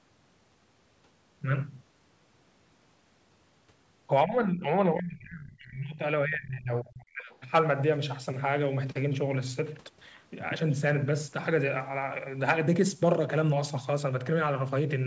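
It's a speech clip, likely with speech suppressed in double talk. The talker ducks by about 15 dB at 4.24–4.68 s, then by about 35 dB at 4.93–6.03 s and 6.25–7.31 s. Right after, at 7.31–7.38 s, there's a faint scrap of the other side's voice leaking through, about 35 dB down, likely residual echo the canceller missed. The top end stops at 8 kHz, which fits a wideband call codec like G.722.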